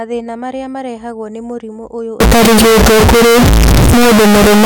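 At 2.20 s the speech turns abruptly into a harsh, very loud signal, and it stays that way to the end of the clip. The waveform sits at an almost fixed, high level and looks almost square. Background noise is as loud as the speech, yet the pitch can still be followed. This is likely float read as integer: 32-bit float samples taken as 32-bit integers, so sign and exponent bits set each value.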